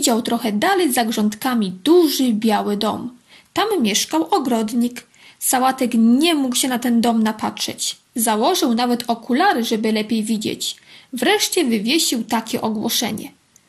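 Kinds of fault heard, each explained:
MP2 compression: The sound is dull, with gurgling, granular distortion throughout. This likely comes from MPEG Layer II coding at a rate near 80 kbps, where upper sub-bands drop out and flicker.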